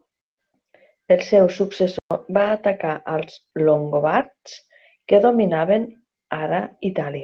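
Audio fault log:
1.99–2.11 s, playback stall: the speech cuts to silence for 120 ms mid-flow, then resumes where it stopped. The player was likely starved of data or its thread was blocked. The waveform shows a flat-line gap, and the spectrogram shows a clean vertical blank band.
2.33–2.51 s, 3.21–3.23 s, 4.19–4.25 s, lost packet rebuilt from error correction: lost stretches of 100, 20 and 40 ms, consistent with 20 ms frames, were filled from low-bitrate copies. There is no gap, but the frames sound rougher and noisier. The spectrogram shows smeared, grainier patches, with no break in the waveform.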